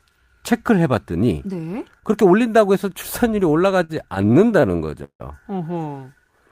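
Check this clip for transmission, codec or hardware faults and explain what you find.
Two transmission faults show up in the speech, both from late-arriving packets rather than lost data.

From 3.77 to 5.22 s there are repeated stalls (stutter): fourteen stops where the receiver extends the last sound while its jitter buffer sits empty. The longest lasts 157 ms, and the fill covers about a quarter of that stretch. Unlike packet loss, nothing drops out; the speech just drags.

From 6.04 to 6.32 s there is a jitter buffer slow-down: the receiver repeats pitch periods to rebuild its reserve, adding 42 ms and running at 88% speed with pitch unchanged. It is a smooth stretch rather than a halt.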